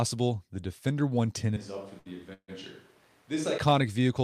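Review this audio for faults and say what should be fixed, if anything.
From 1.57 to 3.58 s there is a switch to a distant microphone. The close microphone's feed was likely lost or dropped, and the recording fell back to one further from the talker. The speech turns roomy and hollow at once, with thinner bass and a level about 10 dB lower, while room noise sits only about 25 dB below the speech. The change in and back out is abrupt. Monitoring the close microphone's signal and keeping it as the primary source would prevent this.

At 1.99 to 2.07 s there is a short stall from a late packet. A packet missed its playout time, the jitter buffer emptied, and the receiver held the last sound for 60 ms until the data arrived, then carried on from the same point. Nothing is lost, but the sound at that moment is stretched with a slight buzz or dip, and playback falls 60 ms further behind. A deeper or adaptive jitter buffer would absorb a delay this small.

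From 2.33 to 2.50 s there is a call audio freeze. Packets were likely held up in the network long enough to drain the jitter buffer completely. The receiver extended the last sound as a fading buzz or hiss for 146 ms in total, the last 70 ms of it silent, before the delayed audio resumed where it had stopped. That inserts a gap without removing any speech. A more stable network path and a larger buffer margin would prevent this.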